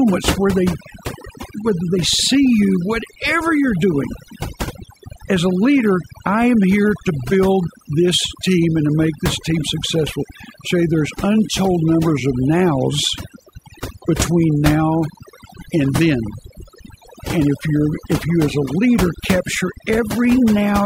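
Overdone noise removal runs through the whole speech clip. A noise reduction stage set far too aggressively is cutting individual frequency bands down hard, or out entirely, whenever their level sits near its noise estimate. Low-level parts of the voice fall below that threshold and get removed along with the noise. The gaps between phrases drop to near silence dotted with twinkling, chirpy specks.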